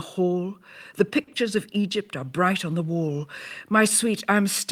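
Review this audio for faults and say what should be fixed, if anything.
At 1.23 to 1.30 s there is a short stall from a late packet: a packet arrived after its playout time, the jitter buffer ran dry, and the receiver held the last sound for about 40 ms before resuming where it left off, so nothing is lost but playback ends up 40 ms later. On a spectrogram this shows as horizontally smeared, frozen harmonics; the waveform shows a repeated cycle. Deeper or adaptive jitter buffering would prevent it.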